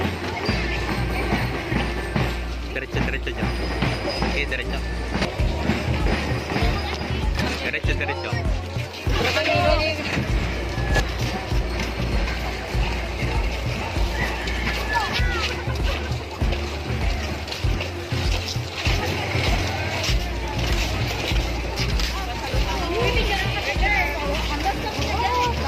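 Nothing stood out as technically wrong on listening.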